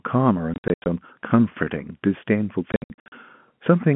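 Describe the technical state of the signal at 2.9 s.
At 2.9 s the link is dropping packets, and the receiver fills each gap with silence. Between 2.72 and 3.12 s about 280 ms is lost in hard-edged holes of up to 60 ms, consistent with 20 ms packets, chopping the narrowband telephone-coded speech.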